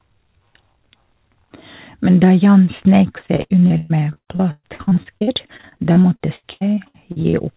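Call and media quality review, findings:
Repeated packet loss (robotic sound), 3.18–7.35 s: dozens of gaps patched by extending prior audio, longest 123 ms, roughly a third concealed. Spectrogram shows stuttering repeated frames below the 4 kHz call-codec ceiling.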